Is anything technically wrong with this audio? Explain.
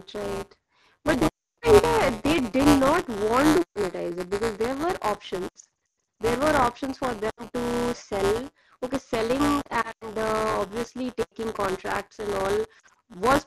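Yes. Buffer tearing runs through the whole clip: a steady 172 Hz rattle under the speech, which fits a 256-sample buffer. Each period carries a short stretch of stale audio, about a tenth of it and roughly 10 ms old, with hard joins on both sides.

Lost AMR speech frames occur at 1.27–1.59, 3.62–3.79, 5.48–6.04, 7.30–7.45, 9.61–10.13, 11.22–11.34 and 12.79–12.96 s. After a frame is lost, the decoder repeats the last good parameters at falling gain. The results are gaps of up to 300 ms that quickly fade to near silence and broken warbling in the scattered stretches around 5.5, 9.6 and 12.8 s.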